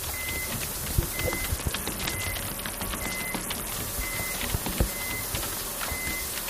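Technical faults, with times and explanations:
1.56 to 3.72 s, Bluetooth SBC bit pool drop: the treble dulls and a gritty grain rises, consistent with the link cutting the SBC bit pool to around 72 kbps. Top sub-bands receive almost no bits, the remaining bands are coarsely quantised, and clarity returns once the rate recovers.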